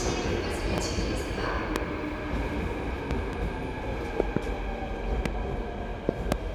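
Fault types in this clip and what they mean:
Loud pop: nine sharp pops land on top of the sound, which continues underneath. Single pops fall at 0.78, 1.76 and 5.26 s, and close pairs begin at 3.11, 4.20 and 6.09 s. Each peaks roughly 15 to 25 dB above the sound. The likely cause is a sudden voltage step or pulse from a plug, switch, static or driver glitch. A waveform shows tall isolated spikes, and a spectrogram shows thin vertical broadband lines.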